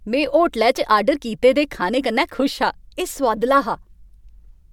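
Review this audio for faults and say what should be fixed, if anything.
Nothing to fix: no faults are audible anywhere in this speech recording.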